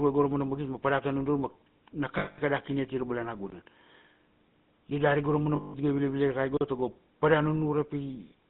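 The whole clip has the gravelly, buzzy edge of the GSM full-rate codec, which fits the old 13 kbps coder. It models the vocal tract and feeds it a sparse, regularly spaced pulse excitation, so the speech comes out rough rather than smooth. The damage is plainly audible. The band is boxed into roughly 150 Hz to 3.7 kHz, so there's no air on top and not much weight underneath.

From 2.18 to 2.39 s there's a stretch of lost GSM frames. The decoder doesn't have real data, so it keeps replaying the last good frame's settings. What you hear is a metallic, ringing smear for about 200 ms, roughly ten 20 ms frames' worth, instead of the speech that should be there.

From 3.50 to 3.52 s a block of digital silence drops in. The output just snaps to zero for 20 ms and snaps back with no fade, leaving a tiny hole. That's likely the sound of a buffer that wasn't filled in time, or samples that got zeroed out.

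The lost GSM frames come back from 5.56 to 5.75 s, with the same held, metallic ring over about 180 ms.

Last, another block of digital silence runs from 6.57 to 6.61 s. At 40 ms this one is long enough to hear as a short gap rather than just a tick.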